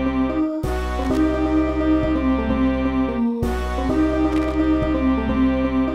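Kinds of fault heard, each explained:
Loose connector crackle: irregular scratchy bursts at 1.02–1.17 s and 4.32–4.64 s, as a worn contact rapidly makes and breaks, chopping the signal.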